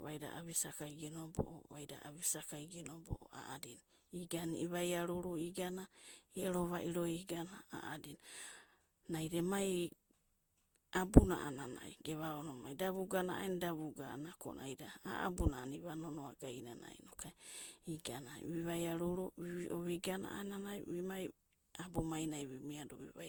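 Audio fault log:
throughout, generation loss: The speech sounds swirly, smeared and hollow, with blurred attacks, though content reaches 20.1 kHz. This likely comes from about seven passes through a lossy codec, fitting Opus at 64 kbit/s. Each pass requantises, so noise and spectral holes accumulate.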